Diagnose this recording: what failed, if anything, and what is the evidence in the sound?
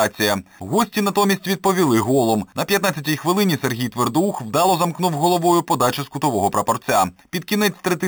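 A bright, metallic fizz rides on the sound for the whole clip, rising and falling with its level, and concentrated between 4 and 8 kHz at about 14 dB below the signal. That is imaging from sample-and-hold upsampling at the rate-conversion stage: 8 kHz audio was raised to 44.1 kHz by repeating samples without an interpolation filter, leaving mirrored spectra above 4 kHz.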